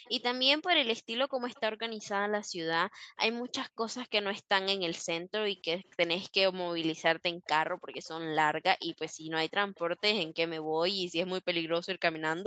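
Speech over a call link, with two recurring faults. An echo leak appears from 0.05 to 1.6 s, again from 5.57 to 5.88 s, and from 7.45 to 10.29 s. A faint delayed copy of the speech trails the original by about 0.29 s each time. It sits well below the direct speech, roughly 30 dB down in the first stretch, around 40 dB down in the second, and most noticeable at roughly 25 dB down in the third. The likely cause is a far-end loudspeaker whose echo canceller failed to subtract everything its microphone picked up. The residue was sent back with the round-trip delay intact. The second fault is background gated by the echo canceller, at 1.69 to 3.16 s, 5.27 to 5.41 s, 7.34 to 7.45 s, and from 10.68 s to the end. The room tone drops by about 40 dB while the canceller clamps the microphone, then returns when it releases. The first gated span loses a bit under a second of background in total, and the two short ones are brief dips.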